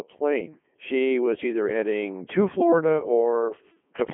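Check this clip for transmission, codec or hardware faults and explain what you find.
One fault runs through the whole speech clip. Throughout, the speech sounds robotic and buzzy, confined to roughly 200 Hz to 3.4 kHz with nothing above 3.6 kHz. This is Codec 2 vocoder damage: the decoder rebuilds the speech from sine waves using only pitch, voicing, energy and envelope, consistent with the 3.2 kbit/s mode.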